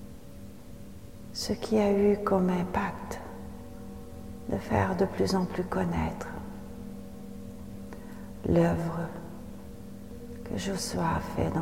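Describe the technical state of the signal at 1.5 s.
Dropped samples at 1.5 s: likely a handful of samples, roughly a tenth of a millisecond, went missing, so the waveform jumps abruptly, giving one sharp click.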